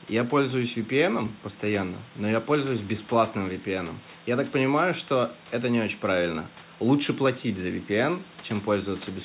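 No technical faults can be heard in the speech; the room's background noise sits about 23 dB below it, and nothing is present above 4 kHz, as expected for a call carried over G.711 mu-law.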